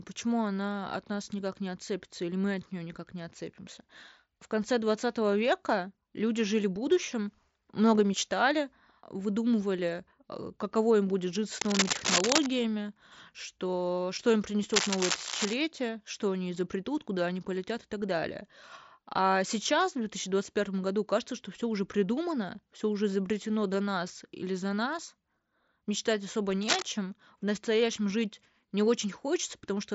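Dense, uneven bursts of scratching and rustling cut across the speech from 11.59 to 12.47 s, rising a little above the voice, then at 14.69 to 15.54 s and 26.62 to 26.82 s at about speech level. This cable scratch noise likely comes from a worn cable or connector moving and its contact resistance jumping rapidly, while the band-limited mSBC headset path keeps everything below about 7.7 kHz.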